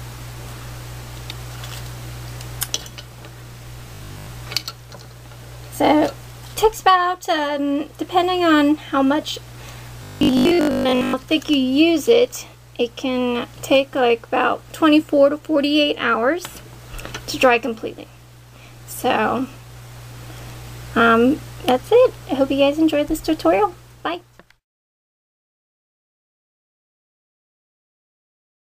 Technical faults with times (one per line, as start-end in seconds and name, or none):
3.94-4.26 robotic sound from repeated short buffers
10.03-11.13 robotic sound from repeated short buffers